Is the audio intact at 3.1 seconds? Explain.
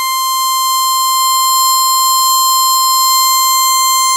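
Yes, the music plays through cleanly at 3.1 seconds, with no audible fault at that moment.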